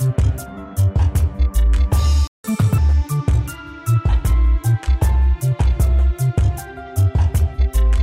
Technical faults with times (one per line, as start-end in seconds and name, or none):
2.27-2.44 playback stall
2.44-2.78 catch-up at higher speed